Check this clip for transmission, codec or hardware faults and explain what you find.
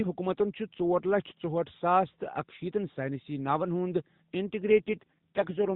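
One transmission fault appears near the end of this speech clip.

AMR rate drop, from 4.66 s to the end at 5.75 s: the voice turns rougher, buzzier and more synthetic, with no gap and no change in bandwidth. Everything still stops at 4 kHz, as expected from the AMR narrowband mobile codec carrying the call. The roughness fits the codec being switched from its 12.2 kbps mode down to its lowest 4.75 kbps mode, a switch that happens when a weak radio link forces the codec to spend fewer bits on the vocal-tract model and pulse excitation and more on error protection.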